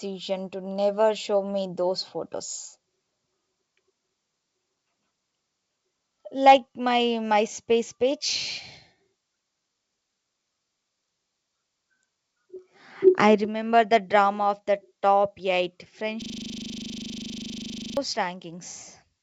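Speech clip with two problems worth flagging. Around 13.07 to 13.09 s there's a short harsh crackle on a loud peak, with roughly 4% of samples in that stretch flattened at the converter's limit. That's likely microphone overload: the input gain was set too hot, so the converter chopped the tops off the waveform. From 16.22 to 17.97 s you get a system hang loop. The machine or driver stalled while the audio hardware kept replaying the same 40 ms buffer, about 44 times in a row, so the audio turns into a rapid, rattling buzz at 25 Hz. Throughout the clip the sound tops out at 8 kHz, which fits a G.722 wideband call path.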